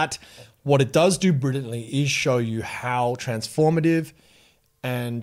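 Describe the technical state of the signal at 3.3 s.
At 3.3 s the speech signal runs intact, with no dropout, clipping, distortion or other fault audible at that point.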